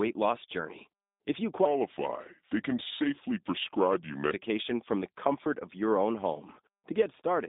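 From the start the speech carries G.729 codec damage throughout. The band is held to roughly 200 Hz to 3.7 kHz, with nothing above 3.8 kHz, which fits an 8 kbit/s coder rebuilding each frame from a filter, pitch predictor and sparse pulses. The voice sounds rough and synthetic.

From 6.75 s to the end, de-emphasis is applied wrongly. An extra treble cut slopes the response downward, about 13 dB lower at 10 kHz than at 1 kHz, leaving that closing stretch duller and more muffled than what precedes it.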